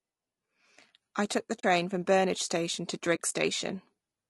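Throughout, the speech sounds rough and grainy, with noise filling the gaps between harmonics. This is low-delay AAC compression, likely AAC-ELD at a bitrate around 32 kbps, distinct from ordinary AAC smearing. At 1.59–1.64 s, after "I took the", and again at 3.15–3.20 s, AAC frame loss with muting leaves 40 ms holes, consistent with two lost frames each. They fade out and back in softly.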